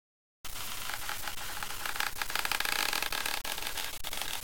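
Throughout, grain tracks the sound at nearly its level, likely from low bit depth without dither, fitting 5-bit truncation; coarse waveform steps, broadband spectrogram smear.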